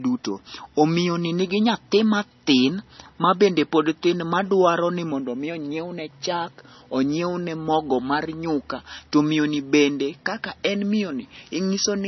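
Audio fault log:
Throughout: low-bitrate audio saved at a high bitrate. The speech has nothing above 5.9 kHz and carries the smeared, warbly artefacts of a very low-rate MP3, likely from a 24 kbit/s encode later re-saved near 185 kbit/s, which could not restore the discarded detail.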